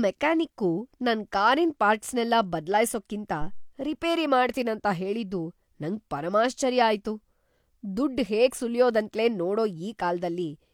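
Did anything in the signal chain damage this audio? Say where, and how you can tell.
Yes: a deep thump at 3.41 to 3.76 s, just before "ರಿಪೇರಿ ಮಾಡ್ತೀನಂತ ಹೇಳಿದ್ದು", decaying in about 78 ms. It's a phantom power thump, a supply switched on or off on the live analogue input.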